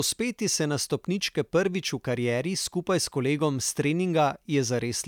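No technical faults are audible.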